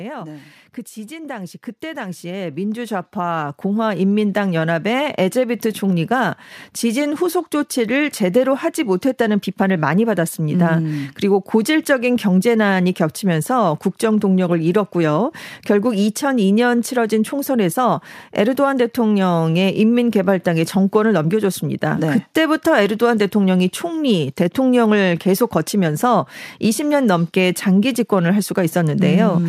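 From 1.07 s to 5.71 s the speech and the room noise behind it swell together, climbing about 14 dB over those few seconds. This is automatic gain rising: the gain control judged the input too quiet and slowly turned its gain up.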